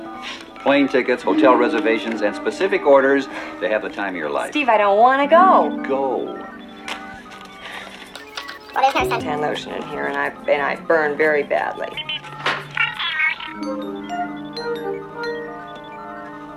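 Section at the wrong speed, 8.15 to 9.20 s: played 1.45 times fast, likely on a mismatched clock, so pitch rises about seven semitones.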